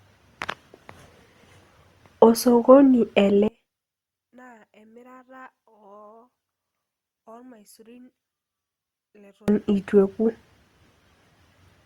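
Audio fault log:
3.48–9.48 s one channel inverted: for six seconds the speech drops by about 32 dB and turns faint, then returns at full level. The likely cause is one stereo channel with reversed polarity. The centred voice then cancels when left and right are summed to mono, and only their small difference remains. On a waveform the envelope collapses to a sliver across this span. A spectrogram shows the voice harmonics nearly gone, with only a faint copy remaining.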